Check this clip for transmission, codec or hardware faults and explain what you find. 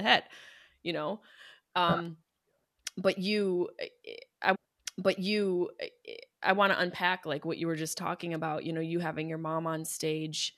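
Two kinds of fault are audible in this speech clip: a stream segment repeated once, and two electrical switching spikes.

At 2.05 s and again at 8.35 s, just after "you were just talking", a sharp, tight snap sits on top of the speech. Each is likely an electrical switching spike, where a nearby switch, motor or static discharge arced and the audio line picked it up.

From 4.54 s to 6.55 s, after "you eh eh i", about 2.0 s of audio plays a second time, with a small blip where it jumps back, before resuming at "want to unpack like". This is a stream segment repeated: the player fetched or queued the same segment twice.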